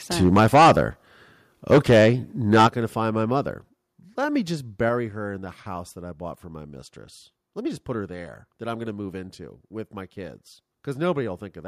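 The microphone input was likely set too high, so from 0.21 to 0.81 s the peaks run about 11 dB past the converter's ceiling and a sizeable share of samples are flattened, giving this microphone overload a harsh, crackling edge. Part way through, at 0.40 s, the input gain was likely stepped down in reaction, and the speech and background drop by about 3 dB at once. The clipping likely recurs from 1.71 to 2.10 s, again about 11 dB over, and from 2.52 to 2.67 s, about 8 dB over, both with the same gritty distortion on the loudest parts. At 2.67 s, just before "going to find my", the level likely falls by about 9 dB in one step, a clear sudden quietening. Further single steps down likely follow at 3.69 s, about 3 dB, and at 4.89 s, between "me just" and "her in the house", about 4 dB, each an abrupt drop in loudness of everything picked up.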